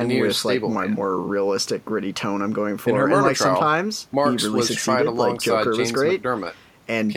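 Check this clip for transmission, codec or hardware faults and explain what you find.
Nothing in this speech recording points to a fault. Close listening turns up no event that needs reporting.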